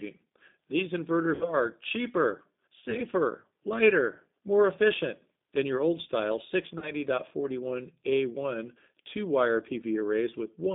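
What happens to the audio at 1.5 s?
Right around there you're hearing VoIP packet loss concealed by the speech codec, running from about 1.35 s to 1.53 s. Roughly 60 ms of audio never arrived, which fits three 20 ms packets going missing. The decoder bridged the gap by repeating its last pitch and vocal tract filter at a shrinking gain, so the sound smears into a buzzy tone or a coloured noise that fades. Because each frame leans on the one before, it takes a moment after the loss to recover, which is why the damage runs on to about 1.53 s.

Underneath all of that is the G.729 codec at 8 kbit/s. The line is squeezed to roughly 200 Hz to 3.7 kHz, and the speech is rebuilt from a filter, a pitch predictor and a handful of pulses per frame. That gives it a plainly audible rough, slightly synthetic edge, and that same pitch-and-filter model is what the concealment keeps extending through the gap.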